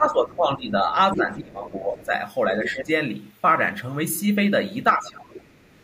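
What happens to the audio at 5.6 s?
Speech suppressed in double talk runs from 4.95 to 5.64 s. The speech drops by around 20 dB at its deepest over about 0.7 s. The likely cause is an echo canceller that, with both ends talking at once, could not separate its own talker from the loudspeaker echo and turned both down.

Just after, from 5.67 s to the end, the other side's voice leaking through appears as a faint second voice about 35 dB below the main speech. This is likely loudspeaker sound that the canceller failed to remove from the microphone signal.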